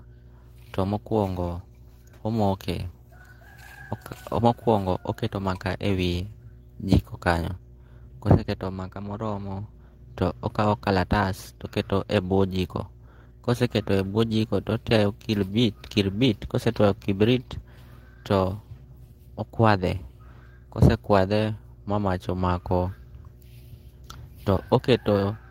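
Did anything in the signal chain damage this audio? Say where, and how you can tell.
Yes. Mains hum runs through the whole clip: a steady 60 Hz tone, with some low harmonics, sits about 25 dB below the speech. This points to the analogue wiring stage. A ground loop, or a nearby transformer, is coupling the power line into the signal before conversion. The hum stays constant under loud and quiet passages alike, which marks it as added interference rather than anything in the source.

Clock drift between sender and receiver is a network or buffer-stage fault that also spans the entire recording. The sender's audio clock runs roughly 5 percent faster than the receiver's. More samples arrive than the receiver plays out, so its jitter buffer keeps filling. It can never settle, and it has to shed audio continually to avoid overflowing. The small timing hiccups scattered unevenly through the speech are the audible trace of that mismatch.

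Repeated timing corrections are the receiver's response, running from 0.04 s to 25.3 s. Because the sender is fast, every edit goes the same way: the receiver trims short pieces to catch up, so the speech plays at about 104 percent of its natural pace. The cuts are small and unevenly spaced. They come across as slight skips and an unsteady, slightly hurried tempo rather than distinct dropouts.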